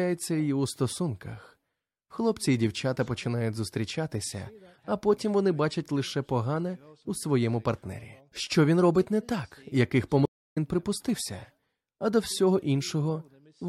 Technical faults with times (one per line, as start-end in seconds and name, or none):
10.25-10.58 stream reconnect